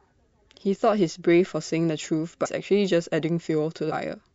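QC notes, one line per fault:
throughout: MP3 compression. Treble is cut at a fixed ceiling and faint detail swirls, likely from lossy coding consistent with 64 kbps; the spectrogram shows a flat upper cutoff and flickering holes.
2.45–2.47 s and 3.91 s: compressed frames skipped. The sound jumps ahead around 0.2 s, about seven 26.1 ms frames, leaving a smeared blip.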